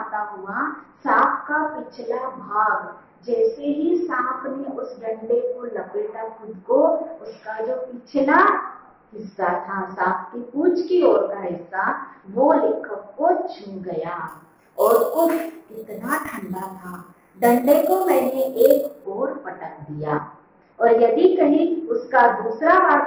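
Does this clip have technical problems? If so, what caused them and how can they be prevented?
Yes. Imaging from sample-and-hold upsampling, 14.28 to 19.04 s: samples were repeated without smoothing, mirroring the spectrum as a metallic fizz between 6 and 12 kHz, about 21 dB down, which points to a rate raised from 12 kHz to 44.1 kHz. Prevent it by upsampling with a proper interpolating low-pass filter instead of sample repetition.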